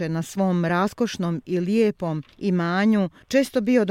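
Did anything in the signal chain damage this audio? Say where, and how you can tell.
No, nothing in the signal chain damaged this audio.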